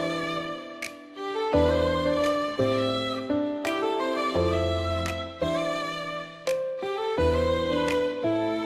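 Nothing in this audio stands out as a technical fault at any point, so there's nothing here to flag.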